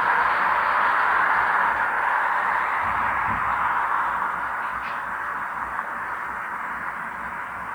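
Nothing in this recording of sounds points to a technical fault, and the signal holds steady throughout.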